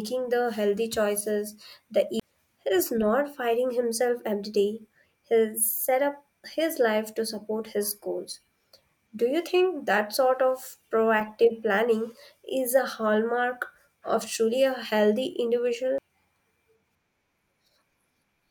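A brief tick and a near-instant gap at 2.20 s, just after "the healthy choices the", with speech resuming from a different point, and another, shorter dropout of a few milliseconds at 15.98 s. These are CD skips: the laser lost its track, the player muted for roughly 20 ms the first time, then resumed on another turn of the disc's spiral.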